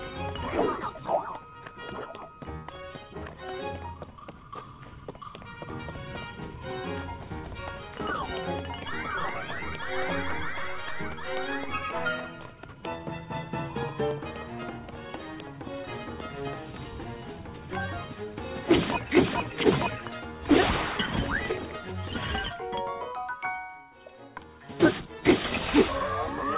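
No technical faults can be heard anywhere here.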